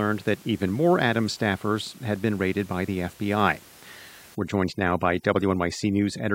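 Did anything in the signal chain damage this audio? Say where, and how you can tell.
Yes, there's overdone noise removal in the call processing stage, kicking in at about 4.35 s and running to the end. The room noise sits roughly 26 dB under the speech up to that point. From 4.35 s the background collapses to near silence with little twinkling specks. That's a suppressor set far too hard, shutting individual frequency bands whenever they get near its noise estimate and taking the quieter parts of the speech with them.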